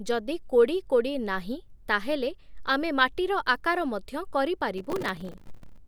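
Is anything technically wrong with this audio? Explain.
Yes, there's a burst of processor overload crackle from about 4.78 to 5.78 s. For that second the system couldn't finish its tiny audio buffers on time, which points to buffers of only a few milliseconds, and dozens of deadlines went by in a row. Each miss replayed a scrap of old audio with hard edges, so the speech gets a gritty, tearing crackle riding on top that cuts out once the load passes.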